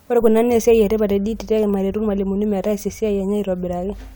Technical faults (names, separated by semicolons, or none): none